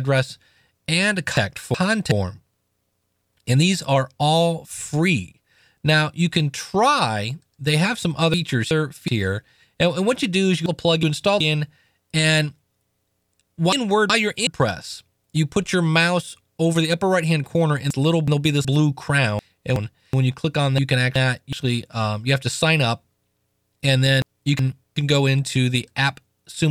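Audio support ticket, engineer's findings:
Garbled flutter, about 0.74 s each: 1.37, 8.34, 10.66, 13.73, 17.90, 19.39, 20.78 and 24.22 s. Frames out of order: two adjacent 371.5 ms blocks swapped in transport and decoded that way. Consistent with runs of four frames. No time lost.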